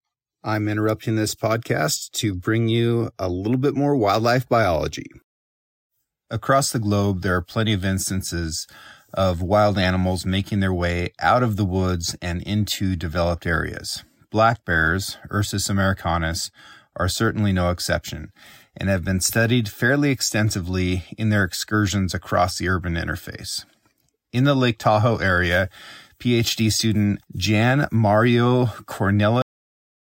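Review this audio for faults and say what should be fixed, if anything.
The speech stops abruptly at 29.42 s, mid-sound, falling straight to digital silence with no decay for the remaining 0.63 s. This is a cut-off end: the final buffers were never written or played, so the audio ends wherever the last completed buffer did. To prevent it, flush and drain all pending buffers before closing the file or stopping the output stream.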